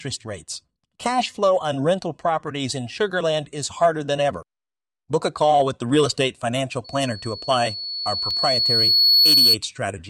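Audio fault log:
3.21 s and 8.31 s, dropped buffer (overrun). At each the speech jumps forward with no gap. A millisecond or two is missing at 3.21 s and a few milliseconds at 8.31 s. The likely cause is samples overwritten before being read.
6.84 to 9.57 s, loudspeaker feedback squeal. A single 4.4 kHz tone rises over about two seconds into a piercing whistle, about 10 dB above the speech. The microphone is hearing its own loudspeaker, and the loop gain at that pitch has gone above one.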